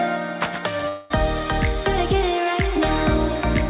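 From 0.88 to 1.12 s the sound dissolves into a fading buzz, likely a long network dropout concealed by the receiver, showing as a smeared, decaying band on the spectrogram below the 4 kHz ceiling.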